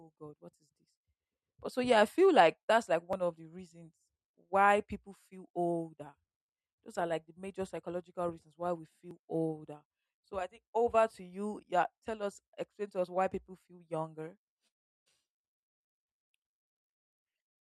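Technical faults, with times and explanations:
3.13 s and 9.11 s, audio missing between chunks: two brief skips exactly 6 s apart, each dropping a sliver of sound of about 20 ms with the edges butted together and no silence. This likely comes from processing in 6 s blocks and losing about 20 ms at each changeover.
14.67 to 15.08 s, call audio freeze: the sound stalls for about 0.39 s, briefly carrying over the last sound before falling silent for about 0.36 s, then resumes exactly where it stopped with nothing lost. This is likely delayed packets draining the jitter buffer, so a pause is inserted.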